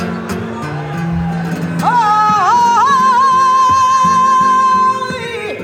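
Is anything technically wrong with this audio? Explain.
No, nothing is technically wrong with this audio.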